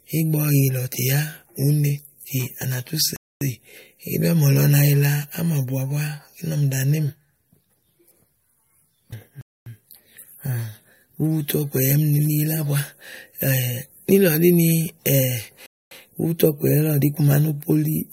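Speech interrupted by a gap between chunks: hard-edged silences of 250 ms at 3.16–3.41 s, 9.41–9.66 s and 15.66–15.91 s. The second and third each follow 6 s of audio, which points to fixed-length chunks joined with padding or late playback starts, so nothing is lost but the flow breaks at each join.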